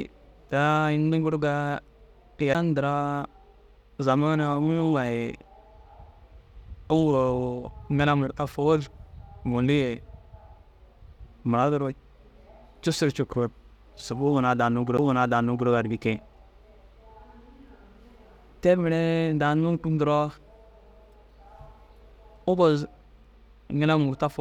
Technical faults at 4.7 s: none

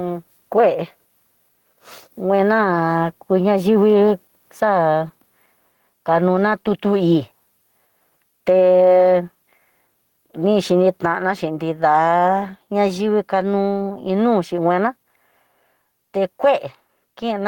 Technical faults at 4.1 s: gain pumping

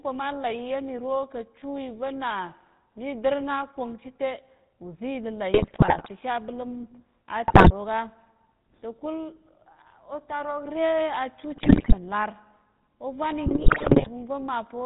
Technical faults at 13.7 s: GSM full-rate codec; GSM bit errors

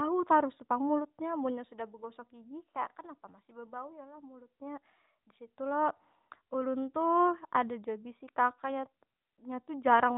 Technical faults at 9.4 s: none

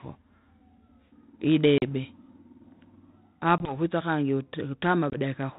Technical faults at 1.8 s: packet loss on an ADPCM call

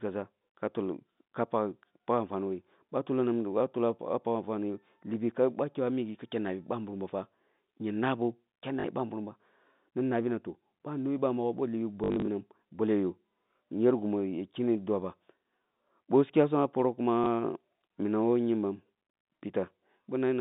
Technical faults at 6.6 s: pre-emphasis left on

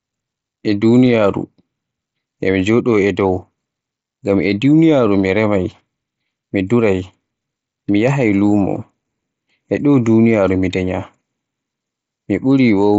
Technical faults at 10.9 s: none

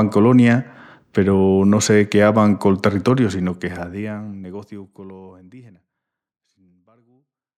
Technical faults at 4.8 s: none

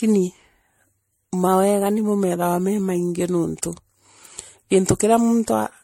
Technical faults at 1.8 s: generation loss; drift correction step

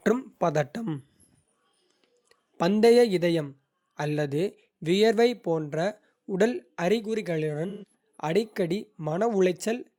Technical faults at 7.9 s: AAC frame loss with concealment

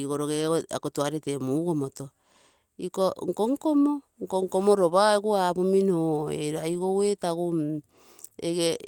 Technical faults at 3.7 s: none

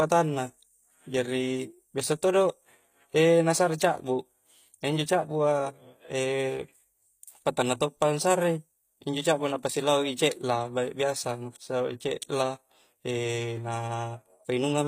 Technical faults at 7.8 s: HE-AAC compression

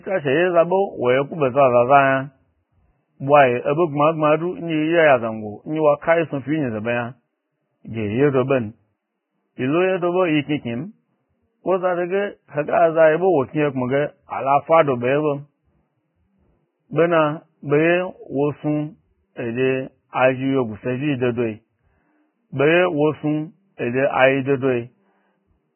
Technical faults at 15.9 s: Vorbis compression

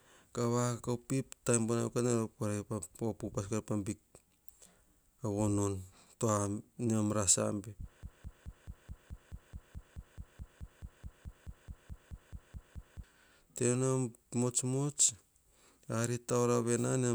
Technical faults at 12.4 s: broken-record loop

